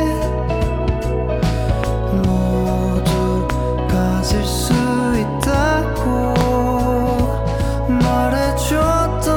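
A sudden voltage step or pulse, likely from a plug, switch, static discharge or driver glitch, is added to the signal path and shaped by the circuits downstream. The result is a loud pop at 1.84 s, 3.50 s and 5.43 s, each lasting about 20 ms, and a double pop from 6.36 to 6.43 s. Each pop is sharp and peaks well above the surrounding sound, which carries on underneath.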